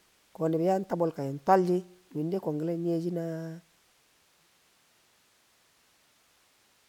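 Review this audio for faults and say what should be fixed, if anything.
No faults found; nothing here needs fixing.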